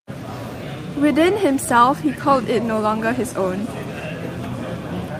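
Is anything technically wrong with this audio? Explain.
No, nothing technically wrong can be heard here.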